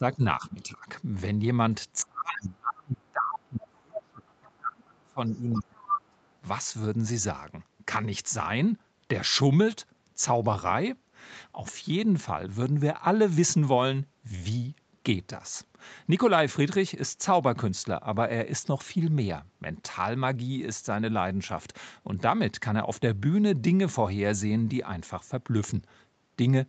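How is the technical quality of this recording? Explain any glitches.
The recording has two related call-processing problems, both in the first six seconds: the speech is repeatedly turned down, and scraps of a second voice get through.

Speech suppressed in double talk, likely: at 0.00–0.22 s, 0.39–0.86 s and 2.03–6.17 s, the echo canceller apparently could not separate the near talker from loudspeaker echo while both sides spoke, so it attenuated everything. The voice dips by roughly 15 dB and then 10 dB in the two short opening stretches. In the long stretch it fades in pieces for around four seconds, falling as much as about 35 dB at its deepest.

Other side's voice leaking through: within that long suppressed stretch, the echo canceller likely left parts of the loudspeaker signal in the microphone feed. At 4.29–4.33 s a brief trace of another voice comes through, about 40 dB below the speech. 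At 5.51–5.63 s a clearer scrap of about 120 ms comes through, only about 15 dB down. The band stops at 8 kHz, as expected from the call path.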